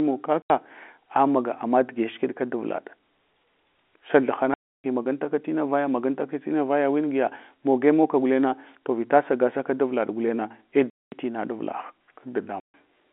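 Packet loss filled with silence chops the speech four times, at 0.42–0.50, 4.54–4.84, 10.90–11.12 and 12.60–12.74 s. The holes run 80, 300, 220 and 140 ms, all multiples of 20 ms, which fits 20 ms packets going missing, and each gap has hard edges.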